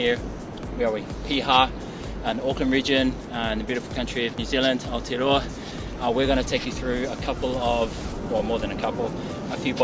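Nothing stood out as a technical fault on listening to this recording.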